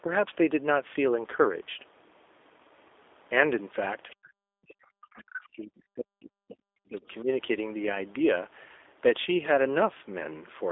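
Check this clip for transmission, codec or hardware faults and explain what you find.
Three faults are present: a codec running through the whole clip, and, from about 4.1 s to 7.3 s, echo leakage and suppression of the talker.

Throughout the clip, G.729 coding at 8 kbit/s limits the sound to roughly 300 Hz to 3.6 kHz and gives it a plainly audible rough, synthetic texture. The codec rebuilds each frame from a filter model and a few pulses. That model-based buzz distinguishes it from plain band-limiting, which sounds dull but clean.

At 4.10–4.15 s and 5.14–5.22 s, faint scraps of another voice, about 30 dB below the talker, break through. The likely cause is the other side's voice leaking through: loudspeaker echo that the canceller failed to remove. Unlike background chatter, these scraps are brief.

From 4.14 s to 7.03 s the talker's level drops sharply, at its deepest by roughly 40 dB, across about three seconds. 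A second, shallow dip of about 5 dB follows at 7.22–7.28 s. This is speech suppressed in double talk. With both sides likely talking at once, the echo canceller turned everything down.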